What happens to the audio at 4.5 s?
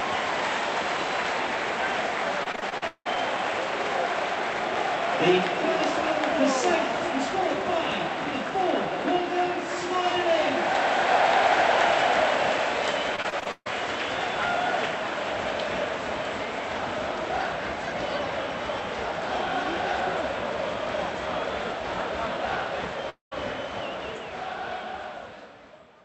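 Nothing goes wrong at 4.5 s: the sound passes through the call path's Opus coding intact, with no dropout, glitch or distortion at that point.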